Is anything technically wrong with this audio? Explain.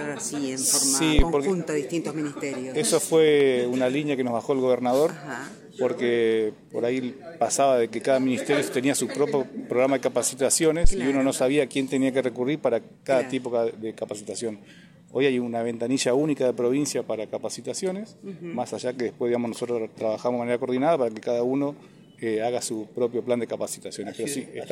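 Yes. Deep thumps at 1.19–1.24 s and 10.85–10.92 s peak near about −6 dBFS and die away within 12–17 ms: a phantom power thump, as supply switching on a live input pushes a voltage step through the coupling capacitors.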